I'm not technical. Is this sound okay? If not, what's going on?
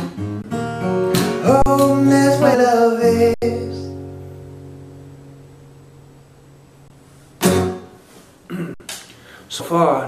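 No. There are two faults. The first is an underrun with held sample: the player ran out of audio data, so the sound freezes flat for an instant, then resumes slightly further on. This happens at 0.42, 1.62, 3.34, 6.88 and 8.74 seconds, lasting between 20 and 80 milliseconds.

The second is damaged data in a compressed stream: part of the stored file is corrupted, so the player misreads it and produces a brief squawk or blip at 2.53 and 9.59 seconds.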